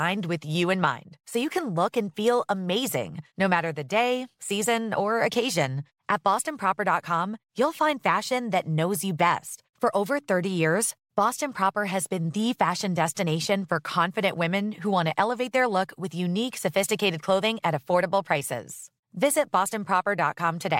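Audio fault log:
No fault is heard in the speech.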